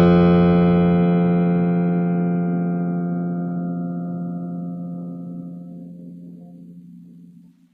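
Throughout the music, the treble sounds bright but gritty and metallic, not tied to the lower harmonics, likely HE-AAC compression at a very low bitrate, near 20 kbps.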